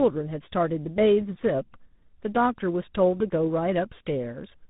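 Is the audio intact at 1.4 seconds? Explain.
No. At 1.4 seconds, as throughout the clip, this is tandem speech coding: the speech was squeezed by a 13 kbit/s GSM full-rate coder, carried over 64 kbit/s G.711 A-law, then re-coded by 32 kbit/s G.726, two lossy speech coders in a row, the second working on the first's damaged output. The result sounds rough and muffled, with a warble, and nothing above about 3.8 kHz survives.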